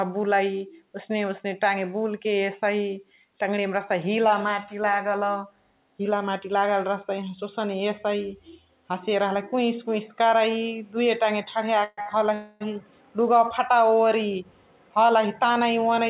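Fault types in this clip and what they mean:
call audio freeze: At 11.84–11.99 s, just after "टाङे ठडिया", and at 12.34–12.74 s, sound stops advancing and fades into held buzz, about 134 ms then 266 ms, the first ending in brief silence, likely from delayed packets emptying the jitter buffer.
short stall from a late packet: At 12.01–12.08 s one late packet leaves the jitter buffer empty. The receiver stretches the preceding sound by about 44 ms, heard as a slightly held, buzzy moment, then playback resumes from the same point with nothing lost.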